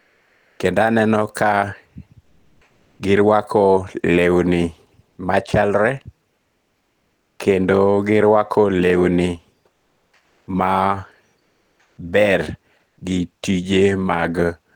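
Comfort noise replaces the real background in six pauses: 0.00–0.59 s before "kendo aneno ka", 2.21–2.99 s before "girwako lewni", 6.35–7.39 s before "kendo girwako lewni", 9.73–10.47 s, 11.39–11.97 s, and 12.87–12.97 s. The real background gives way to a flat, even hiss, dropping about 7 dB and 6 dB in the third and fourth gaps, likely from Opus discontinuous transmission. Unlike a noise gate, the pauses are never silent.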